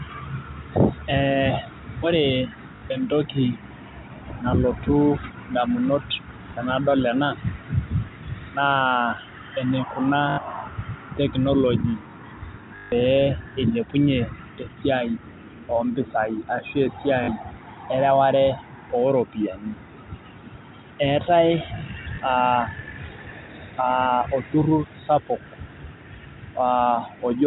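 Short robotic stutters and blips interrupt the speech at 2.76 s (60 ms), 4.34 s (20 ms, a single-packet blip), 10.3 s (80 ms), 12.76 s (160 ms, the longest), 17.24 s (40 ms) and 22.16 s (20 ms, a single-packet blip). The longer runs take on a 50 Hz buzz. This is packet loss with the last packet repeated: lost audio is filled by replaying the previous chunk, which fits 20 ms packets, out of step with the pitch. The band-limited sound of G.711 telephone coding is heard throughout.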